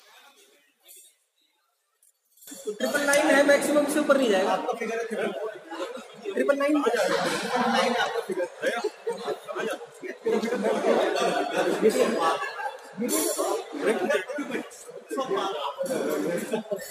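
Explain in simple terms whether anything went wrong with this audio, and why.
Likely one channel inverted: from 0 to 2.48 seconds one side is flipped, so when combined, the shared middle cancels and the sound goes faint.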